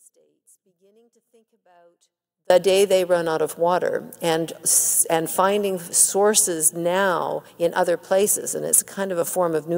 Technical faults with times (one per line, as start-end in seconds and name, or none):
0.00-2.50 audio dropout to a faint residue
8.41-9.77 sample clock jitter